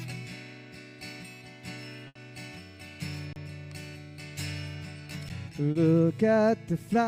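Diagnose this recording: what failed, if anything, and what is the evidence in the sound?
From 2.07 to 2.18 s the sound stretches into a held, fading tail, then resumes further on with a jump. This is a burst of packet loss in the network path: about 80 ms failed to arrive, the receiver extended the last sound while fading it, and that audio is gone.

At 3.33 to 3.36 s the waveform goes flat for about 31 ms, and again at 5.29 s for about 11 ms. This is an underrun with held sample at the driver or buffer stage. The output ran dry, the converter held its final value, and the audio that should have played in each gap was skipped.

Around 5.71 to 5.78 s there is a brief smeared wobble rather than a clean transition. This is short concealed packet loss on the network: roughly 40 ms arrived too late for the decoder, and concealment synthesised a continuation from the preceding sound before blending back.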